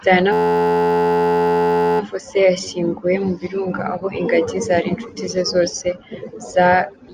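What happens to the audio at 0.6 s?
At 0.6 s the audio is caught in a system hang loop that runs from 0.33 s to 2.00 s. The machine or its audio driver stalled while the sound hardware kept replaying the same ring buffer, so a single 11.61 ms slice of speech repeats exactly, well over a hundred times. That loop length fits a 512-sample buffer, and cycling at 86.1 Hz it merges into a steady, pitched buzz rather than a stutter.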